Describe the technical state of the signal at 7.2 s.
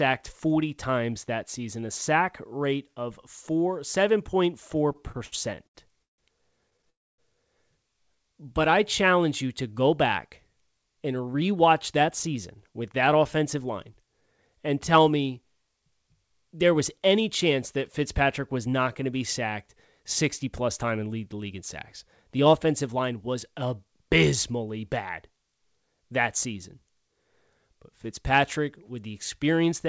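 At 7.2 s the speech resumes after a call audio freeze from 6.90 to 7.20 s, likely a jitter buffer that ran empty while packets were held up. The last sound fades to near silence, then continues exactly where it stopped. Unlike a dropout, nothing is lost; about 0.28 s of delay is added instead.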